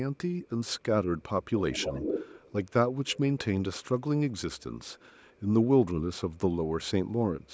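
Echo leak appears at 1.72–2.52 s, clearly audible, then faintly at 2.68–2.72, 3.06–3.19, 4.57–4.63, 4.82–5.4 and 7.46–7.54 s. It is a copy of the speech arriving 0.42 s late, likely residue a loudspeaker's echo canceller missed. Unlike room reverberation, it is a distinct repeat rather than a smooth decay.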